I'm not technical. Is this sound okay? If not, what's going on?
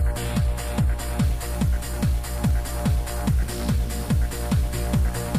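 No. From about 1.23 s to the end, the audio turns harsh and buzzy, with a hiss in quiet moments. This is likely a stuck bit, one digital bit frozen at a fixed value by a broken line or converter.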